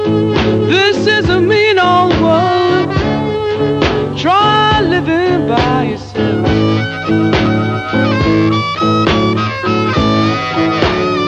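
No technical faults are audible.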